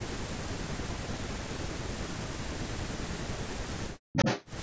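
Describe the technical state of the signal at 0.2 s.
At 0.2 s the speech is intact, with no dropout, distortion or other fault, only the expected call microphone processing that trims the lowest bass and leaves nothing above 8 kHz.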